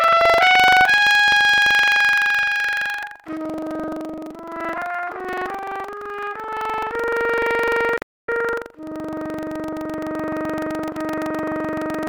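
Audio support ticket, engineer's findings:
Buffer tearing, throughout: continuous robotic buzz at 23.4 Hz, present only while signal plays. Writer and hardware reader crossing inside each period, which fits a 2048-sample ring buffer. Small slice of each buffer, under a tenth, replays audio roughly 100 ms old.

Digital broadcast dropout, 7.96 to 8.29 s: sound fades to silence within 8 ms, returns after a hole of about 0.31 s. Receiver muting on lost or checksum-failed frames, probably in the tuner or demux stage. Content during the gap is unrecoverable.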